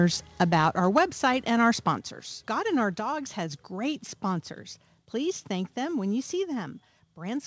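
A speech recording, heard through a call path with nothing above 8 kHz, which fits a G.722 wideband call. At 0.97 to 0.99 s there is microphone overload. The peaks overshoot by about 4 dB and their tops are flattened, so several percent of samples are clipped. That adds a brief harsh crackle. The likely cause is a microphone input set too high for the converter. There are also two sudden level drops, heard as the microphone volume stepped down. The first comes at 0.98 s, about 3 dB, right on the distorted peak. The second comes at 1.98 s, about 5 dB. Both voice and background fall together. The likely cause is the call software lowering the device's input gain after detecting overload.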